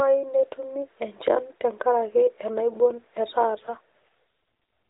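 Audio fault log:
3.54–4.07 s, AMR rate drop: speech turns rougher and more synthetic, fitting a step from 12.2 to 5.9 kbps, with no gap or band change.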